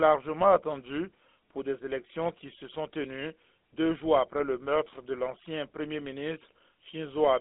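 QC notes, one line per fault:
Throughout, GSM full-rate codec: the speech carries a plainly audible buzzy, gravelly roughness, the sound of the early GSM coder, which fits a 13 kbps stream. The coder models the vocal tract and excites that model with evenly spaced pulses, keeping only a third of the excitation samples. That coarse excitation produces the grit. The band is narrowed to a phone line of roughly 250 Hz to 3.6 kHz, with nothing above 3.8 kHz, so sibilants lose their air.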